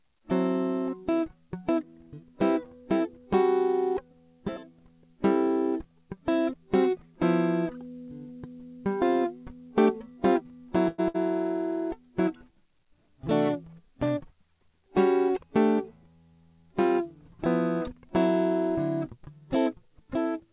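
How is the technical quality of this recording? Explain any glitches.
The music has come through a phone-style call link: nothing sounds above 4 kHz, which points to a narrowband call codec such as G.711 mu-law, and there are three timing glitches in a short stretch.

From 10.88 to 11.00 s the music stops moving and the last sound hangs on as a fading buzz or hiss for about 100 ms, then carries on from exactly where it left off. That is a call audio freeze, likely caused by packets held up in transit so that the jitter buffer ran dry. The receiver stretched the final sound to cover the wait, which adds a pause to the music without losing any of it.

From 11.08 to 11.16 s there is a second, shorter hold of about 60 ms. Here the music comes back further on than where it stopped, so roughly 60 ms of the passage is gone. This is a burst of packet loss. Several packets went missing or arrived too late to play, and the receiver bridged the hole by continuing the last sound and fading it down before jumping ahead.

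From 13.63 to 14.18 s the music rushes, running at about 110% speed with no change in pitch, so the tempo briefly lurches forward. This is a jitter buffer speed-up. After the earlier delay the buffer held more audio than it needed, so the receiver trimmed out short pitch-period slices, around 70 ms in total, to bring the latency back down.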